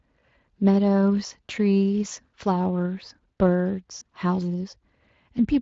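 From start to finish the speech carries the sound of the Speex codec, a CELP coder that rebuilds the voice from a filter and a coded excitation. The damage is plainly audible: a hoarse, noisy grain that fits a middle setting near 20 kbps. On a spectrogram, harmonics below 4 kHz look smeared and grainy.

At about 2.09 s, lasting to 2.13 s, comes the first instance of VoIP packet loss concealed by the speech codec. The gap fits a single lost 20 ms frame. The decoder filled it by repeating its last pitch and filter at falling gain, so the sound briefly turns stretched and fading. Because each decoded frame depends on the previous one, the voice stays weak and blurred for a short stretch afterwards.

The same fault returns at about 3.99 s, running to 4.04 s, again matching one missing 20 ms frame. It has the same character: a frozen, fading extension in place of the changing voice, a brief dip in level, then a smeared recovery as the decoder resynchronises.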